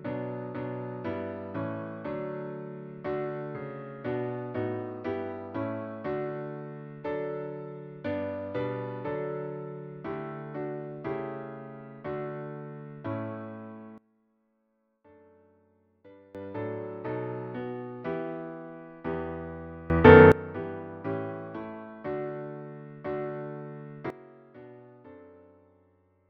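At 13.98 s the level drops about 20 dB until 16.35 s, jumps up about 21 dB from 19.90 to 20.32 s, then falls about 17 dB from 24.10 s to the end. Each is a sudden gain jump, likely an unramped digital gain change. Unlike a fade or compressor action, each step is instant and the background noise shifts with the sound.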